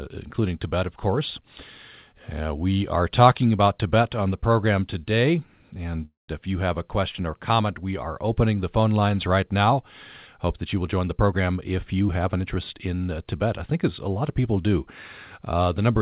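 At 6.05 s the speech halts in a call audio freeze lasting until 6.31 s. The last sound stretches into a fading buzz and then about 160 ms of silence, likely because delayed packets emptied the jitter buffer. Unlike a dropout, nothing is lost: the speech resumes exactly where it stopped, only late.

From 10.97 s to 12.88 s a jitter buffer speed-up plays the speech at about 112% speed, trimming roughly a fifth of a second of surplus buffered audio. It sounds hurried but keeps its normal pitch within the narrowband call sound, which ends at 4 kHz. A simple resampling speed-up would raise the pitch instead.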